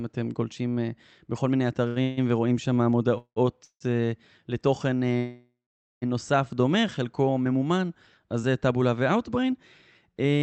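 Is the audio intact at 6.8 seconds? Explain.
No. From 6.54 to 6.96 s the speech drags at the same pitch, stretched by about 57 ms and playing at 88% speed. This is a jitter buffer slow-down: running short, the receiver repeated single pitch periods to rebuild its reserve.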